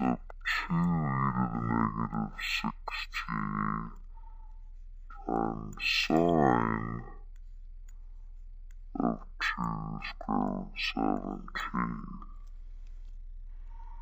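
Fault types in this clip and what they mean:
Stereo read as mono: the left and right samples got read back-to-back as one channel, so everything runs at 0.5x speed and drops a full octave (12 semitones) for the whole clip. You'll also catch a faint mirrored copy sitting up in the top half of the spectrum.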